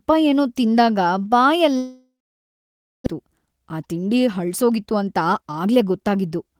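At 1.77 s the speech cuts out until 3.08 s, which points to a long network dropout as the likely cause. The last sound decays as a fading buzz or hiss into about 0.94 s of silence, and roughly a second of audio never returns.

From 3.18 to 5.80 s a jitter buffer speed-up follows as the receiver works off the backlog. Short pitch-period segments, about 0.3 s in total, are cut out repeatedly, so the speech runs at 110% speed, hurried but at unchanged pitch.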